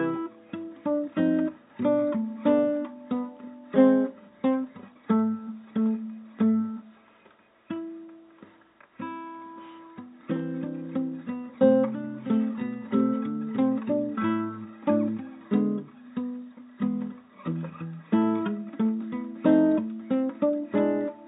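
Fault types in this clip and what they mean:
No faults can be heard anywhere in this recording.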